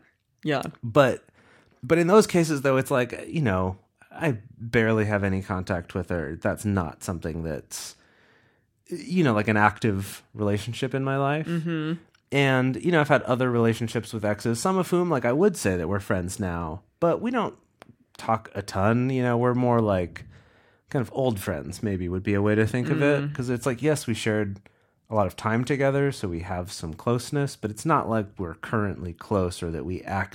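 No technical faults are audible anywhere in the speech recording.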